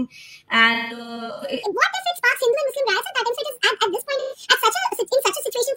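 AAC frame loss with concealment hits this speech clip from 0.73 to 1.52 s and again from 4.19 to 4.38 s. Missing audio frames were patched from the last good spectrum, so about 427 ms scattered over 683 ms (longest gap roughly 150 ms), then 128 ms, comes out smeared and noisy. A section at the wrong speed runs from 1.63 s to the end, playing 1.58 times too fast, so pitch and pace jump together by around seven semitones, likely from a player or editor fitting that part to the wrong clock.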